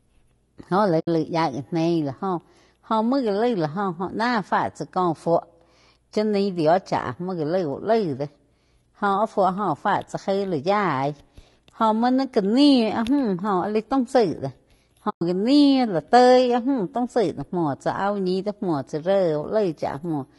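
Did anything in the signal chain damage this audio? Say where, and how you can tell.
Yes. The codec stage has left damage across the whole 20-second speech clip. The voice sounds rough and grainy, with a noisy fill between the harmonics. The damage is plainly audible. This is likely low-delay AAC compression, the AAC-ELD type used for video calls. At a low bitrate, bits run short and quantisation noise lands between the harmonics. The level of damage fits a bitrate around 32 kbps.

AAC frame loss with muting causes two dropouts. The first runs from 0.99 to 1.08 s. The second runs from 15.09 to 15.22 s. They last about 80 ms and 120 ms. The sound fades out and back in rather than cutting off hard. This happens at the decoder in the network path. Frames went missing, and the decoder zeroed their spectrum. The overlapping windows then blurred the edges of each gap. The lengths fit four and six lost 20 ms frames.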